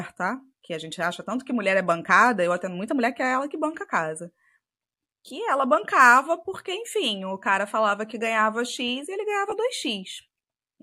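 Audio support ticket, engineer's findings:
Lost LE Audio frames, 9.50–9.52 s: brief noisy smear in the speech, about 20 ms, fitting two lost 10 ms LC3 frames over the Bluetooth LE link. Decoder concealment refilled the gap from the last received spectrum with randomised signs.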